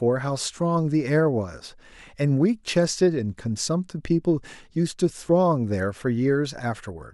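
No technical faults can be heard anywhere in the speech. There is no point in the audio that calls for a timestamp or a repair.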